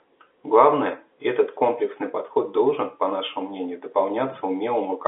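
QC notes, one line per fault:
No faults found; the speech sits in the normal G.711 telephone band, roughly 300 Hz to 3.5 kHz with nothing above 3.8 kHz, as that line coding gives.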